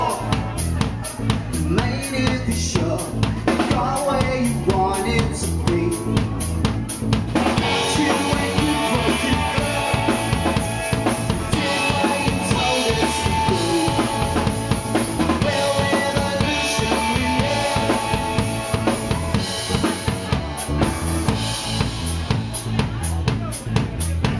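No technical faults are audible.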